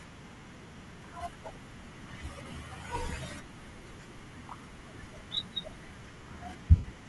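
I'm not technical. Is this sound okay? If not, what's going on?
No. Throughout the clip the speech has a breathy, grainy edge, with the upper frequencies sounding thin and hissy. That is typical of Bluetooth LC3 compression, which likely discards fine high-frequency detail and fills the gap with noise.

There are also two spots with lost LE Audio frames. At 2.51 s, a single 10 ms chunk briefly turns to a noisy smear. From 6.76 to 6.84 s, a longer 80 ms loss smears and then fades toward silence.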